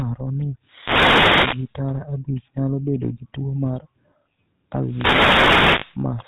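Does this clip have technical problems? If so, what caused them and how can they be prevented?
Yes. Throughout, the speech has a buzzy, gravelly roughness and a dull top end with nothing above 4 kHz. This is GSM full-rate codec damage, and it fits 13 kbps full-rate GSM. The codec models the vocal tract and drives it with a sparse, regularly spaced pulse excitation. That coarse excitation produces the grit, and the narrow band removes the brightness. Avoiding it means carrying the call over a wideband codec such as AMR-WB or Opus instead of legacy GSM full rate.

A wireless microphone noise hit runs from 0.63 to 1.74 s and ends just before "tara abich nyalo bedo". A second hit runs from 4.83 to 5.99 s. Each one is heard as a swish of static rising over the speech. The radio signal from an analogue FM transmitter faded as reflections cancelled, so receiver noise came up through the audio. 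Diversity receivers, good antenna placement and a clear line of sight between transmitter and receiver prevent these fades.

Lost GSM frames cause a brief rough, metallic ringing from 5.80 to 5.85 s, inside the second noise hit. The sound fits a single dropped 20 ms frame that was concealed by repeating the last good frame's settings. That repetition holds the sound in place instead of letting the speech move on. A stronger radio link, or a codec with better error protection and concealment, prevents these dropouts.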